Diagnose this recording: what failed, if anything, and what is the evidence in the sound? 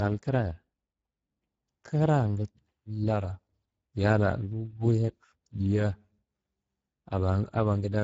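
Across the whole recording the speech sounds noisy and hoarse, and nothing is present above about 7.7 kHz. This points to the Speex codec stage running at a low bitrate, around 10 kbps. The CELP excitation gets too few bits, and the upper band is only a noise-like fill.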